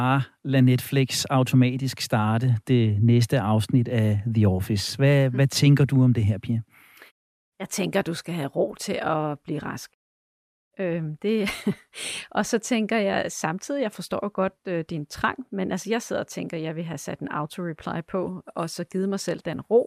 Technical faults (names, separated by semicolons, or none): none